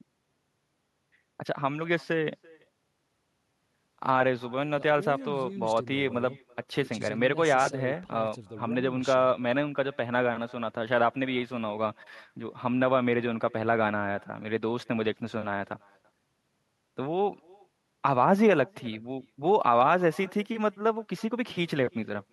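Throughout the speech, an echo with no canceller is present: the far end's loudspeaker feeds its microphone and nothing removes the return, so each phrase is shadowed roughly 300 ms later by a thin copy sitting about 28 dB below the direct sound.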